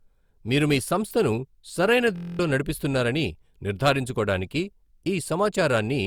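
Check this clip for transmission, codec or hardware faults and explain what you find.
Three faults are present: one runs through the whole recording and two are brief events.

Low-bitrate audio saved at a high bitrate affects the entire speech clip. The MP3 carries the artefacts of a lean earlier encode, although content continues up to 20.2 kHz. The likely cause is a file first compressed by a low-rate codec such as Opus at around 48 kbit/s, then re-saved as a roomy MP3 around 192 kbit/s. The second encode cannot restore what the first discarded.

A system hang loop runs from 2.16 to 2.39 s. The speech gives way to a rapid buzz at 43.1 Hz, made by one 23.2 ms fragment repeating exactly ten times, which fits a 1024-sample buffer. The host froze while the sound hardware kept replaying that buffer, so about a fifth of a second of real audio is lost.

Hard clipping occurs between 3.86 and 3.90 s. 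It is a short, harsh crackle on a peak. The signal exceeded the level some stage could pass by about 2 dB. The waveform tops were sliced flat, and the flat tops added bright, high harmonics.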